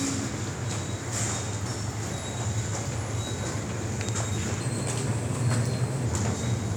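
From 4.61 to 6.06 s, a section at the wrong speed runs 1.12 times too fast, likely from a clock mismatch. It sounds about two semitones higher and hurried. Tempo rises with pitch, which sets it apart from a pure pitch shift.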